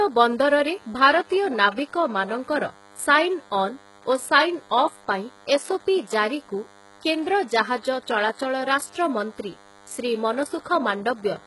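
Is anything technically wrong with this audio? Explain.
Yes, two faults run through the whole speech clip.

A thin, steady buzz sits under everything from start to finish, roughly 30 dB below the speech, pitched at 100 Hz with a dense stack of harmonics above it. This is DECT cordless phone buzz: a nearby DECT handset or base transmits a brief radio burst every 10 ms, and some stage of the audio circuitry rectifies those bursts, turning the 100 Hz repetition rate into an audible tone.

Throughout, the s sounds are gritty and lispy, the upper treble has a metallic sheen that doesn't quite match the voice below it, and nothing is present above 11.5 kHz. The likely cause is heavy HE-AAC compression, consistent with a very low bitrate around 12 kbps. The codec keeps only the lower spectrum and synthesises the top by copying lower bands upward under a coarse envelope, so the rebuilt harmonics don't line up with the real ones.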